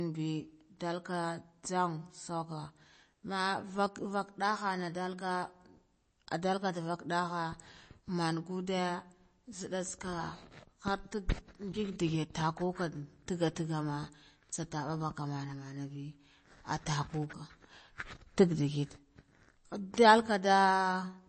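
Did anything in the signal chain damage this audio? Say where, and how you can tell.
Yes, the damage sits at the codec stage and runs through the whole speech clip: it has the sound of MP3 compression, likely at a low bitrate around 32 kbps. Nothing survives above about 8.3 kHz, a hard treble ceiling, and weak spectral detail flickers in and out, giving a watery, swirly texture with chirpy s sounds and smeared onsets. A plain low-pass filter or narrowband call path would dull the top end cleanly, without that shifting, metallic churn.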